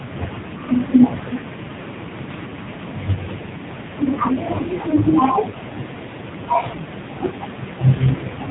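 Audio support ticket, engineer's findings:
Buzzy, synthetic speech throughout, dull with nothing above 4 kHz. Likely component: AMR narrowband mobile codec (AMR-NB) in the path. Mechanism: 8 kHz-rate vocal-tract model driven by sparse pulses per 5 ms. Heavy damage fits a low mode, around 5.9 kbps.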